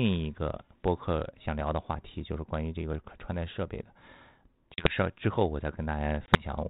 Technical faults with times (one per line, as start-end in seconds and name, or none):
4.74-4.94 packet loss on an ADPCM call
6.26-6.43 packet loss on an ADPCM call